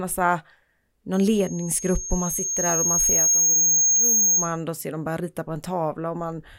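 From 1.13 s to 4.61 s a loudspeaker feedback squeal takes over the speech: the mic is catching its own speaker and looping a 6.5 kHz tone that swells for about two seconds, ending up roughly 5 dB above the voice, then cuts out just before "då ser de börja".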